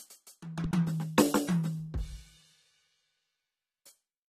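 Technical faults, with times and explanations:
Throughout, AAC compression: the music sounds dull and smeared, with a warbling, fizzy edge on sustained tones, which fits low-bitrate AAC-LC at around 32 kbps. A spectrogram shows a hard ceiling at 14.1 kHz and patchy, holed bands beneath it.
0.64 to 0.90 s, loud pop: two sharp pops land on top of the music, which carries on underneath, peaking a few dB above it. They likely come from a voltage spike such as a switch or static. The waveform shows two narrow spikes standing clear of the surrounding level, and the spectrogram shows two thin vertical broadband lines.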